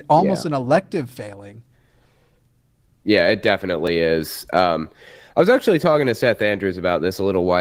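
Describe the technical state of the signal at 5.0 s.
At 5.0 s the speech is intact with no fault present, carried through Opus voice compression at full bandwidth that leaves only light coding damage.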